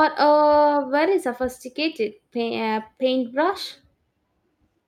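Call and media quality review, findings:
Nothing wrong turned up on this one, no dropouts, glitches or artefacts anywhere in the speech to flag.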